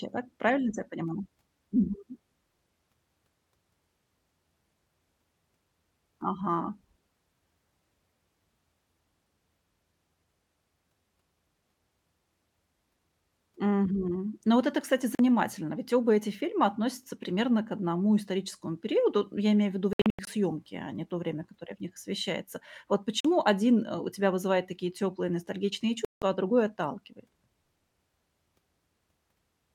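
Four short holes cut into the speech at 15.15 s, 19.93 to 20.27 s, 23.20 s and 26.05 to 26.22 s. These look like Bluetooth dropouts, likely packets arriving too late for the headphones. The 43 ms gaps are brief, but the 19.93 s stretch stutters through 213 ms of silence, and the 171 ms gap at 26.05 s swallows sound before speech resumes as if it had played on.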